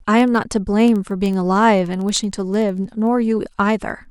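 Word clock ticks run from 0.13 s to 4.05 s: about fifty clicks at a steady rate of roughly one every 70 ms. The receiving device runs on its own clock, drifting by roughly 300 ppm, so each slip drops or repeats one sample.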